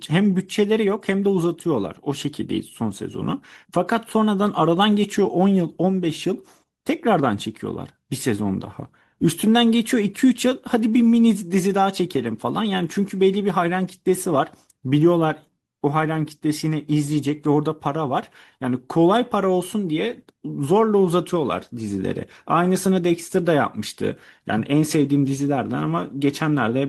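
A speech recording with no technical faults to report.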